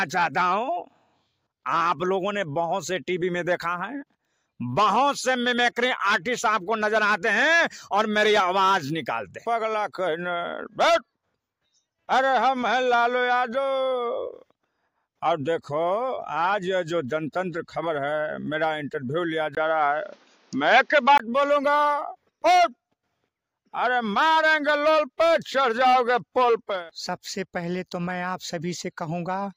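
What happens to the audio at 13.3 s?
Nothing goes wrong at 13.3 s; the audio plays through that moment intact, with no dropout, click, distortion or other fault.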